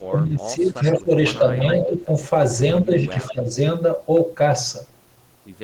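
From 0.0 to 2.11 s, and again from 2.82 to 3.51 s, the speech sags by up to about 20 dB and then by about 10 dB. This is likely speech suppressed in double talk, where the echo canceller turns down the near talker too. The waveform envelope shrinks.

At 0.83–0.92, 1.72–2.1 and 3.26–3.36 s, a fainter copy trails 179–180 ms behind the speech, likely echo leak. On a spectrogram it shows as a weaker, delayed repeat of the same harmonic pattern.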